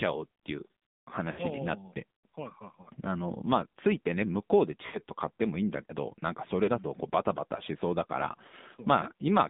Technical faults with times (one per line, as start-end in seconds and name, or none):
0.00-9.49 AMR narrowband mobile codec
1.32-1.40 lost AMR speech frames
2.82-2.87 lost AMR speech frames
4.86-4.99 lost AMR speech frames
6.64-6.71 lost AMR speech frames
8.48-8.55 lost AMR speech frames